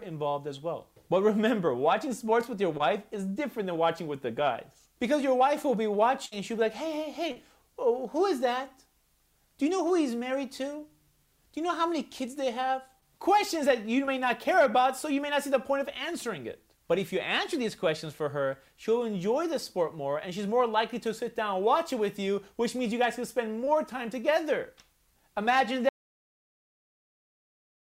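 At 2.77 s there is short concealed packet loss. About 20 ms of audio failed to reach the decoder in time. The receiver bridged the hole by extending the last sound, then blended back into the real signal. It is heard as a brief smear or wobble.

At 6.26 s comes a burst of packet loss, running to 6.34 s. About 60 ms went missing in a row. The receiver stretched the preceding sound and let it fade. The result is a held buzz or dying hiss. The audio then jumps ahead, with that stretch gone.

More short concealed packet losses follow, at 7.32, 12.99, 14.05 and 23.65 s. The one at 7.32 s is the longest, with about 40 ms lost. The others cover about 20 ms each and sound like quick smears or wobbles. A short sound in any of these gaps can vanish entirely.

At 25.89 s the audio drops out to silence and never returns. The last two seconds are silent, with no room tone at all. The sound cuts off mid-flow. 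The likely cause is a lost input, such as a disconnected device, a failed link or an accidental mute, while recording carried on.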